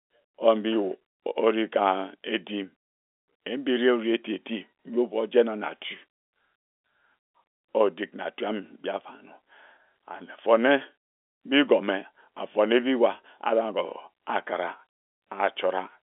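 No technical faults are audible.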